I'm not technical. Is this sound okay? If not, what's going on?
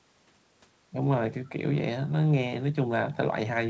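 No. This sounds like an echo leak, most likely from a loudspeaker on the far end whose echo canceller let a little of the voice slip back. It shows up as a very faint copy of the speech arriving about 0.45 seconds late, in brief scraps at 1.45–1.49 s and 3.13–3.17 s.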